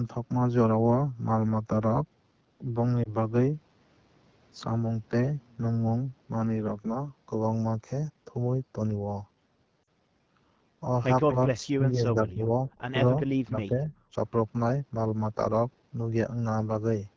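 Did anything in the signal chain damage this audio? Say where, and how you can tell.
Yes. In the codec stage, the AMR wideband (HD Voice) codec at 8.85 kbit/s sounds rough and raspy throughout. A spectrogram shows smeared noise-filled energy from 6.4 to 7 kHz and nothing above.

In the network, lost AMR speech frames cause a brief dip at 3.03 to 3.14 s (20 ms lost) and a drop to near silence at 9.83 to 9.88 s (40 ms). The decoder repeats old parameters with falling gain, so the waveform sags.

In call processing, there is speech suppressed in double talk from 11.3 to 12.53 s (drops of about 35 dB), 13.11 to 13.29 s, and 13.45 to 13.93 s (about 20 dB). The waveform shows dips, likely from the echo canceller ducking during overlap.

Also in call processing, what is likely an echo leak from 11.31 to 11.67 s adds a faint copy of the sound delayed 246 ms and about 25 dB down. It shows as a repeated, weaker pattern on the spectrogram.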